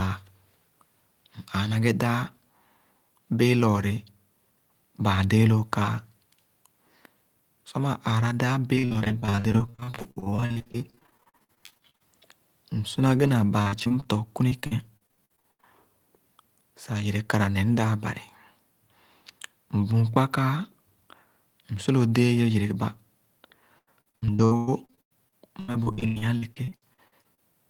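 Repeated packet loss (robotic sound) hits right after "maa aara daa" from 8.75 to 12.02 s, again at 13.62–14.07 s, 14.49–15.65 s and 23.79–27.42 s. Short, rapid dropouts get patched by stretching the last bit of sound, up to about 43% of a stretch, so the speech turns choppy.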